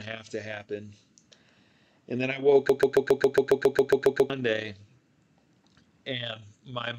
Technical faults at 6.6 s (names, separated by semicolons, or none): none